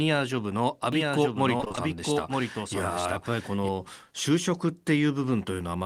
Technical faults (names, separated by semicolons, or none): doubled audio track; repeated packet loss (robotic sound)